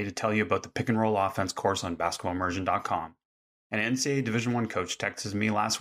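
No technical faults can be heard anywhere in the recording.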